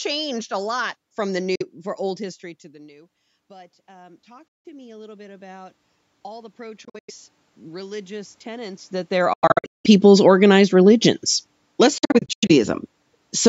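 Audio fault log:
1.55–1.62 s, 4.48–4.65 s, 6.85–7.10 s, 9.33–9.86 s and 11.98–12.51 s, Bluetooth dropout: audio packets were likely not reaching the headphones in time, so the output falls silent. The gaps hold about 46 ms, 163 ms, 163 ms, 395 ms and 279 ms of missing sound. The last three are broken into several short holes spread over roughly 0.23 s, 0.51 s and 0.51 s, with the longest single run at 93 ms, 186 ms and 93 ms. After each gap the speech picks up further along, as though it had kept playing in the silence.
2.04–8.95 s, automatic gain rising: around 2 s the talker moves away and the input drops by about 23 dB. The gain control responds by slowly raising its gain by about 17 dB over nearly seven seconds. The speech first sounds distant and quiet, then gradually swells back up. The room noise rises along with it, so the background grows louder at the same slow rate as the voice.
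9.19–11.08 s, automatic gain falling: around 9 s the talker moves. The gain control eases its gain down by about 4 dB over roughly two seconds. The speech sinks lower, and the background sinks with it. This takes place while the long broken dropout between 9.33 and 9.86 s is also cutting holes in the sound.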